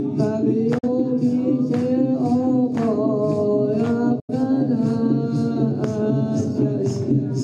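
At 0.78 s and again at 4.20 s the sound drops out. Each is a digital broadcast dropout: the receiver muted when frames went bad. Both gaps fade out over about 8 ms. The first gap, lasting to 0.89 s, fits one lost frame. The second, lasting to 4.34 s, fits two.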